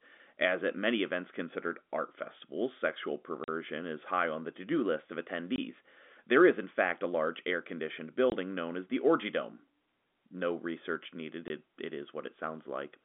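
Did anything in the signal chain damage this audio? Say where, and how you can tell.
Yes, packet loss filled with silence at the network stage. The gaps fall at 3.44 to 3.48 s, between "considered art festivals sexual" and "is high on the", then at 5.56 s after "to do list of", at 8.30 s, and at 11.48 s after "research needed". Each hole lasts 20 ms, except the first at 40 ms, which fits a 20 ms packet size with two consecutive packets dropped there. The receiver inserted digital silence, so each gap starts and ends abruptly, over the narrowband G.711 telephone sound.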